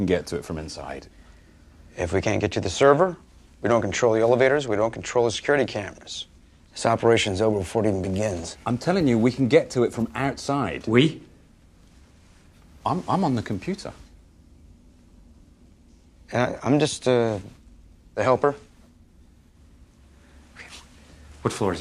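Nothing in the audio stood out as a technical problem on listening.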